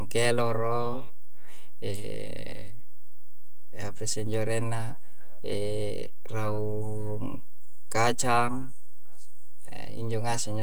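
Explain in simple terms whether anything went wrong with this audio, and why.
DC offset runs through the whole recording, from the first moment to the last. The entire sound wave has been pushed to one side of its resting point instead of swinging evenly around zero. You can't hear this shift in the speech itself, but it wastes some of the room the recording has before it would distort. It also leaves a constant, silent push at the very lowest end of the sound.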